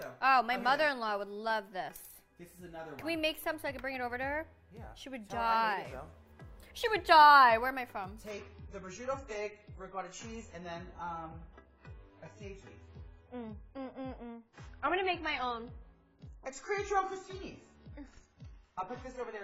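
At 8.31 s the audio drops abruptly to a lower-bitrate adaptive stream and stays there to the end. Nothing above 7.7 kHz remains and codec artefacts thicken, which points to a much lower bitrate. Unlike a network dropout, there is no gap or stutter, only a sudden loss of quality.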